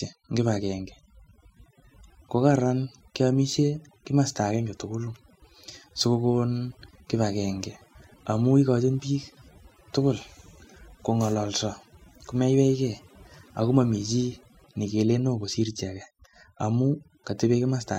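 Speech runs through overdone noise removal from start to finish: pauses sink to near silence with twinkling specks. Unlike a gate, which cuts everything at once, single frequency bands drop out independently.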